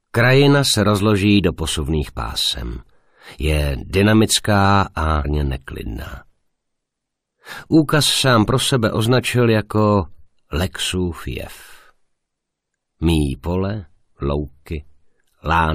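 At 5.24 s a stream segment was likely skipped after failing to load, so the sound jumps abruptly ahead with a brief blip at the join.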